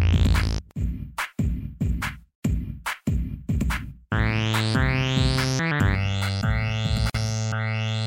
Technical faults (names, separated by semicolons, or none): channel delay (comb filtering); gap at a join of encoded pieces